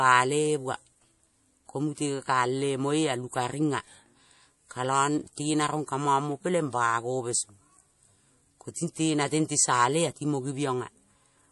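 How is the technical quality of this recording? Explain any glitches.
The recording is held back by compression damage that runs through the whole clip. The likely cause is MP3 compression at a low bitrate, about 48 kbps. Nothing reaches above 11.4 kHz. Weak frequency lines drop in and out between frames, giving a watery, swirly texture, with metallic chirps on s sounds.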